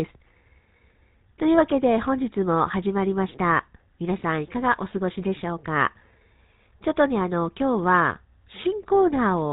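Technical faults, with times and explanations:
Throughout, GSM full-rate codec: the sound has a buzzy, gravelly roughness and nothing above 4 kHz, as pulse-driven vocal-tract coding at about 13 kbps would produce.
8.58 to 8.61 s, GSM bit errors: a brief squawk as corrupted filter, pitch or gain values distort the spectrum, consistent with a single damaged frame.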